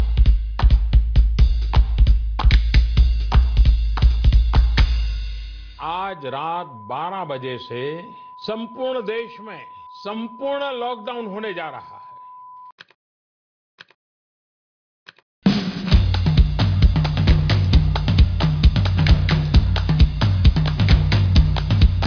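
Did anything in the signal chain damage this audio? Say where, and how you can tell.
No, nothing in the signal chain damaged this audio.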